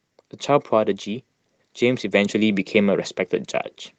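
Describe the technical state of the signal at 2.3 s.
At 2.3 s the automatic gain control is still raising its gain, partway through a slow climb of about 5 dB that runs from 0.46 to 2.73 s. Having judged the input too quiet, it lifts everything at once, so the speech and the background noise swell together.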